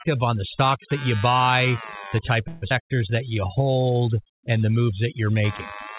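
Ground currents from the computer's changing load leak into the audio circuit for the whole clip, producing computer activity noise: a buzzing pulse train repeating at around 100 Hz, sitting roughly 20 dB below the speech. Because it follows the machine's activity rather than the speaker, it rasps on through pauses as readily as under the voice, a gritty texture that never settles into a clean steady hum.

Overdone noise removal is also present throughout. A noise reduction stage set far too aggressively has been clamping individual frequency bands whenever they resemble its noise estimate, and the softer parts of the speech get cut along with them. Pauses drop to an unnatural near-silence scattered with twinkling specks, with the voice's quieter consonants and tails eaten away. The band-limited top, with nothing above 4 kHz, fits a G.711 mu-law call path at 64 kbps.

From 2.48 to 2.64 s, right after "you buy the type", a call audio freeze appears, likely caused by packets stalling in transit so the jitter buffer ran dry. 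The receiver fills about 140 ms by extending the last sound as it fades. Nothing is lost. When the packets arrive, the speech resumes exactly where it stopped, now running 140 ms later than before.

At 2.70 to 2.73 s, just after "buy the type of", a stretch of audio is dropped, causing a skip ahead. About a tenth of a second of speech vanishes, with only a few milliseconds of filler bridging the join. The two sides butt together almost directly, so the speech lurches forward with a clipped, abrupt seam.

Immediately afterwards, from 2.73 to 3.65 s, a jitter buffer slow-down follows, with the receiver rebuilding its reserve by repeating single pitch periods over and over. This stretches roughly 96 ms of extra audio into the passage, playing it at 90% speed. The pitch stays put, but the syllables sound drawn out and sluggish.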